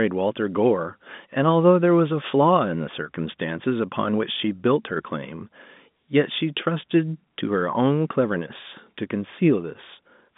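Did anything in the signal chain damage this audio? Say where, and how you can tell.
No, nothing in the signal chain damaged this audio; it simply carries the narrow band of an ordinary G.711 telephone line.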